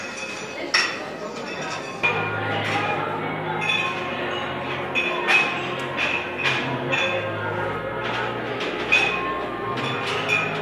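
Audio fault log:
No faults detected.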